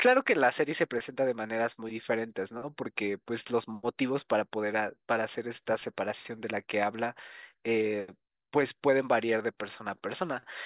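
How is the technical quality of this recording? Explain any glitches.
No audible glitches or faults.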